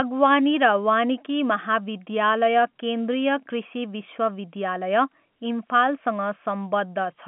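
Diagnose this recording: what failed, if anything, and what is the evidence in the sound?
Nothing failed: no stage of the chain shows a fault in this speech recording. What comes through is an ordinary telephone path, G.711 A-law coding, which fits a 64 kbps line, with the band confined to roughly 150 Hz to 3.4 kHz and only faint coding grain riding under the level.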